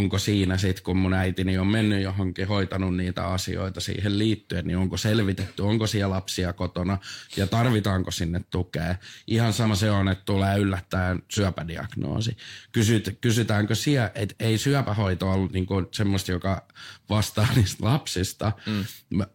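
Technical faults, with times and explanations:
9.62 to 9.67 s and 11.34 to 11.39 s: compressed frames skipped. At each point the speech jumps forward, losing about 50 ms. Whole blocks of the compressed stream never reach the output. They were either absent from the file or rejected by the decoder as corrupt. The jump is therefore a whole number of frames.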